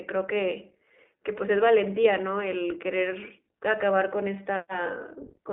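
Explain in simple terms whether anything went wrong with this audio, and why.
Something did go wrong: the whole clip, from start to finish, has passed through the iLBC codec, a telephone-grade speech codec. It keeps only a narrow band, roughly 250 Hz to 3.6 kHz, so the speech sounds thin, muffled and boxed-in. It also rebuilds the sound in separate 20 ms chunks, each coded on its own, which leaves a plainly audible rough, slightly synthetic texture across the entire speech.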